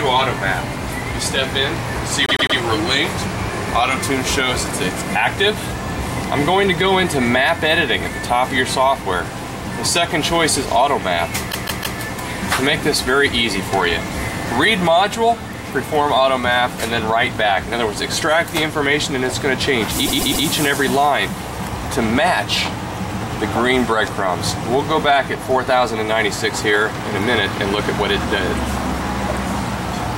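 The audio stutters three times, at 2.26, 11.51 and 20.05 s, each a short block replayed three extra times. These are repeated frames: compressed frames sent more than once, adding about 0.31, 0.47 and 0.39 s.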